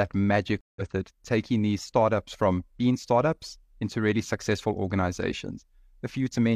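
Around 0.61 to 0.82 s there's a stream reconnect: about 150 ms of silence, then a fresh decoder picks up roughly a tenth of a second later at "it taking these startups".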